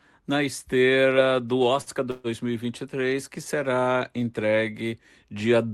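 Right after "na esteira do", at about 1.81 to 1.90 s, there's a short stall from a late packet. The jitter buffer ran dry, so the last bit of speech gets stretched for about 53 ms with a faint buzzy hold, then picks up exactly where it left off. Nothing is lost.

Shortly after, from about 2.11 to 2.27 s, you get a call audio freeze. The sound hangs as a fading, buzzy continuation for about 134 ms, never dropping to silence, then resumes without skipping anything. That's likely packets held up in transit emptying the jitter buffer, which adds a gap instead of cutting audio.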